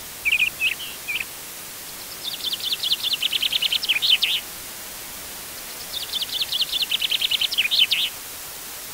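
From start to finish the clip carries low bit depth with dither: the sound is held at just 5 bits, and dither was added before rounding, so instead of gritty distortion the quantisation error spreads out into steady white noise. You hear it as a constant, even hiss sitting only roughly 10 dB under the signal, smooth and unchanging rather than crunchy.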